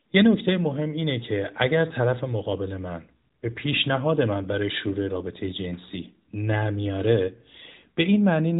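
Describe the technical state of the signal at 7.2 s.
At 7.2 s the speech is intact, with no dropout, click or distortion, and it carries the narrow band of an AMR narrowband mobile codec, with nothing above about 3.8 kHz.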